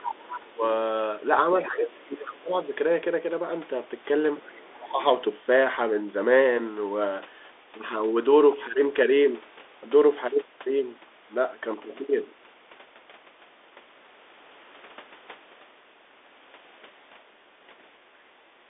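Right from the start the whole clip carries the sound of a Bluetooth CVSD headset codec, and the damage is plain to hear. Nothing gets through above about 3.8 kHz, so it has that narrow phone-line quality, which fits the 64 kbps headset link. Underneath sits a grainy hiss. The encoder only says up or down for each tiny step, so sharp s sounds come out scratchy, and loud high-frequency bits outrun the step size and distort. The call's microphone processing trims the deepest bass on top of this, which is normal.

From 0.00 to 0.54 s there's other-side voice leaking through, about 15 dB below the main speech. It's likely the far end playing on a loudspeaker and not being fully cancelled. From 0.32 to 0.63 s the main speech gets pushed down by something like 20 dB at its deepest, which is speech suppressed in double talk. The canceller likely can't tell the two voices apart and ducks them both.

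It happens again. A short 40 ms scrap of leak at 1.64 s sits inside a longer suppression from 1.55 to 2.70 s, where the talker is turned down for roughly a second in total. Then a fainter leak, about 25 dB down, runs from 4.40 to 4.51 s, and right after it the speech is ducked again from 4.51 to 5.00 s.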